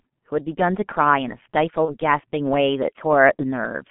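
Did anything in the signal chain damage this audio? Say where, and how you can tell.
Yes. Throughout the clip the speech sounds muffled and hoarse, with smeared consonants and nothing above about 3.4 kHz or below about 150 Hz. That points to the codec stage: heavy G.723.1 codec damage at around 6.3 kbit/s. The coder models the voice in coarse 30 ms frames with a slowly updated filter, so fast consonant detail blurs and the narrow telephone band strips the sound's brightness.

At 1.85 to 1.97 s and again at 3.36 to 3.44 s, the speech briefly turns into a fading buzzy tone or coloured noise before recovering. This is VoIP packet loss concealed by the speech codec, a network fault. Each gap fits a single lost 30 ms frame. The decoder filled it by repeating its last pitch and filter at falling gain, and because later frames build on that guess, the distortion persists past the gap itself.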